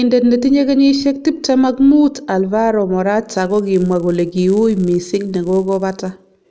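From 3.34 s to the end, the resampler restarts on every block: each 10 ms chunk is converted alone, leaving an edge error at every seam, heard as a 100 Hz buzz riding the speech. Unlike mains hum, it vanishes in pauses.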